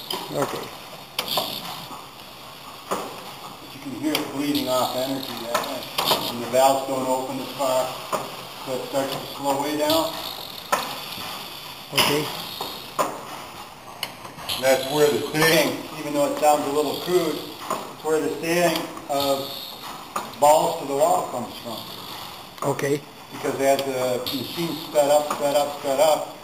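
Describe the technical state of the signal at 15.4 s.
At 15.4 s the signal is inside a wrong sample rate fault running from 13.8 s to 15.52 s. The samples are clocked out slower than they were captured, with no resampling, so the audio runs at 0.919 times its proper speed and its pitch drops by 1.47 semitones. Speed and pitch fall together by that one ratio, which fits 48 kHz material played back at 44.1 kHz.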